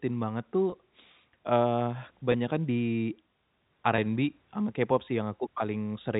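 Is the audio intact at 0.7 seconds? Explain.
No, there is packet loss with pitch repetition from 0.70 to 0.72 s. About 20 ms of audio went missing, which fits a single lost packet, and the receiver filled the gap by repeating the last pitch period. That briefly holds the sound as a slightly buzzy, sustained tone.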